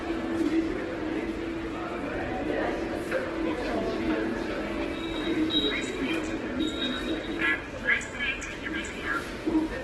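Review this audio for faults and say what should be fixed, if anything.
Opus compression runs throughout. Nothing sits above 12.1 kHz. Tones sound rough, grainy and noisy rather than swirly. Starved bands seem filled with folded or noise-like content. The heavy damage likely comes from CELT-mode encoding at a low rate, around 12 kbps. Re-export from the original source at a much higher Opus bitrate or in a lossless format.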